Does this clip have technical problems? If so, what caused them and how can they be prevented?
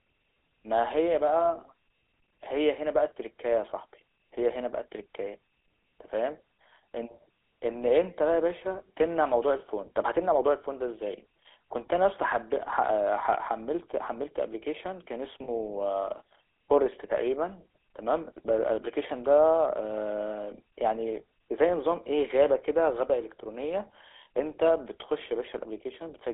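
Yes. All through the speech there is a buzzy, gravelly roughness, and the sound is confined to a telephone band of about 300 Hz to 3.5 kHz, so it sounds thin and boxy. This is the GSM full-rate codec. It rebuilds the voice from a vocal-tract model driven by sparse, regularly spaced pulses, at a rate that points to about 13 kbps. The coarse excitation causes the grit, and the line filtering removes the lows and highs. To prevent it, use a wideband or modern codec such as AMR-WB, EVS or Opus when capturing or relaying the call.

From 15.44 to 15.49 s, about 40 ms, the sound briefly freezes into a rough, metallic ring instead of continuing naturally. These are lost GSM frames. When the decoder received bad data, it reused the parameters of the last good frame, so one spectral shape repeats for a moment. The length fits two missing 20 ms frames. To prevent it, improve the radio link or add stronger error protection, and capture the audio before it crosses the mobile network where possible.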